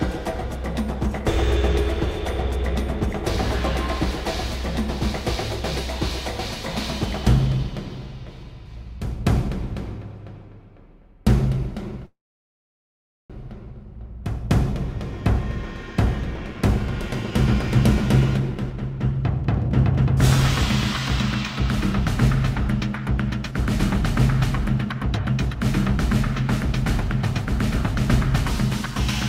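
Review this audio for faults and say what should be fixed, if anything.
From 12.05 to 13.32 s the sound stops: the last moment is briefly stretched, then about 1.15 s of silence, and it resumes where it left off with nothing lost. This call audio freeze likely comes from delayed packets emptying the jitter buffer.

Jitter buffer speed-up runs faster at unchanged pitch at 15.93–17.32 s (111%), 18.40–20.07 s (109%) and 24.85–25.97 s (104%). The receiver trimmed pitch-period pieces to shed excess buffered delay, roughly 150, 150 and 50 ms.

To prevent both, fix the network delay spikes and let the jitter buffer drain more gradually.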